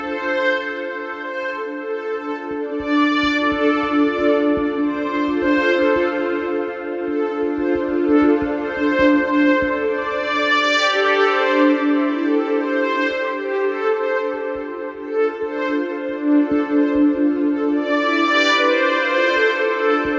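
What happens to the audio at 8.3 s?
Nothing goes wrong at 8.3 s; the audio plays through that moment intact, with no dropout, click or distortion.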